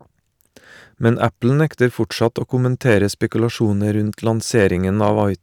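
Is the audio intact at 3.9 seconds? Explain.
Yes, at 3.9 s the speech plays through with no dropout, click, glitch or other fault to be heard.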